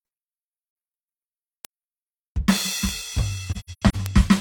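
A music clip with two kinds of technical fault. AAC frame loss with muting causes a brief dip from 0.70 to 0.75 s, about 43 ms, which fits one lost frame. Between 3.51 and 3.95 s, a cluster of such holes totals 256 ms scattered over roughly 430 ms, with the longest run around a tenth of a second. The decoder zeroes the missing spectrum, and the overlapping windows fade the music out and back in. A spectrogram shows full-height vertical blank bands with tapered edges, and the waveform shows smooth envelope dips to silence. Bit error spikes are three isolated sharp ticks at 1.65, 2.89 and 4.06 s, lasting one, three and two samples respectively. Each comes from a flipped bit that makes the sample value jump by a power of two and then return, unrelated to the music. On a waveform each appears as a lone needle, and on a spectrogram as a thin vertical line spanning the whole frequency range.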